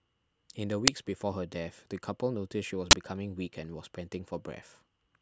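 It's a speech recording with two uninitialised buffer bursts: a 5 ms one at 0.88 s and a 20 ms one from 2.91 to 2.93 s. Each block was played before audio was written into it, so stale memory came out as a sharp, loud spurt of digital noise.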